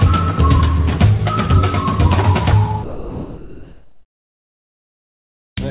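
From 2.84 s to 5.57 s, about 2.7 s, the background is replaced by comfort noise: a steady, featureless hiss about 3 dB quieter than the real ambience it stands in for. That ambience was already very faint, about 66 dB below the loudest sound. The likely cause is discontinuous transmission, where the sender stops sending during the pause and the receiver synthesises noise. On a spectrogram the texture turns smooth and uniform, still capped at 4 kHz by the call codec's narrow band. The waveform shows a slightly lower, perfectly even floor.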